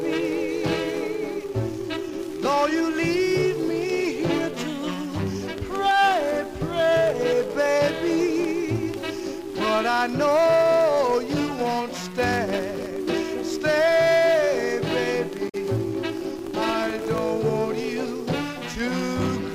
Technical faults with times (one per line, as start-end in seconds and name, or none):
12.19-13.14 processor overload crackle
15.45-15.55 damaged data in a compressed stream
16.17-17.18 processor overload crackle